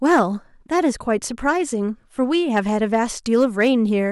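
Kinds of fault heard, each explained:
Hard clipping: a stage was driven about 3 to 4 dB beyond its limit, so the loudest speech peaks were cut flat, adding high harmonics heard as gritty crackle from 0.09 to 0.22 s, 2.56 to 2.95 s and 3.34 to 3.70 s.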